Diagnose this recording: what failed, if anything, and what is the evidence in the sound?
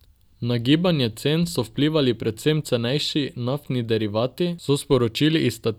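Nothing failed here, and the sound gives no evidence of a fault at any stage of the chain.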